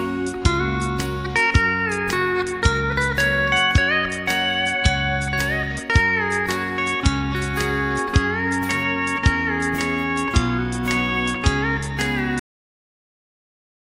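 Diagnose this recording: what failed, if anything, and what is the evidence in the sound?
The recording has a cut-off end, a failure at the buffer or storage stage. At 12.39 s the sound stops mid-event. There is no fade and no natural decay. The level falls straight to digital silence, which runs for about 1.5 s to the end of the file. The mechanism is simple. The final buffers of audio were never written to the file, so the capture stops at 12.39 s and the remaining time holds only silence.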